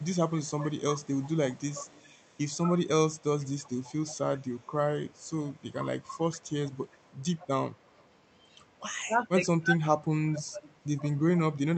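It's a speech recording with two problems running through it. First there's an echo leak: a faint copy of the voice trails the original by about 120 ms, from the start to 8.1 s and again from 10.64 s to the end. It sits very low, roughly 30 dB under the speech in the first stretch and a bit quieter in the second. That's likely a far-end speakerphone whose echo canceller didn't fully remove what its mic picked up and sent back. The second problem is speech suppressed in double talk: the voice dips or chops out in patches at 0.39–1.03 s, 2.56–2.87 s, 4.9–6.16 s and 8.96–11.76 s. The first two dips are moderate, around 10 to 15 dB, and the later two go much deeper, around 25 dB. The last stretch is the worst, with well over a second of the voice pushed down. The likely cause is the echo canceller failing to tell the talker apart from loudspeaker echo while both sides spoke, so it turned everything down. 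Underneath all this, the band tops out around 8 kHz, which fits an Opus call path.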